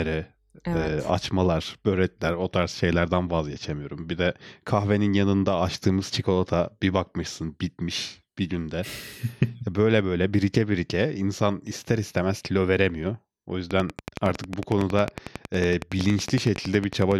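A speech recording with a train of clicks running from 13.71 s to 17.13 s, close to the end. The clicks are similar in shape and evenly spaced at about 10.9 per second, roughly forty in all, and they peak around 10 dB above the speech. They are audible as steady ticking over the speech and in its gaps. The likely cause is interference from nearby equipment or a faulty connection or power supply.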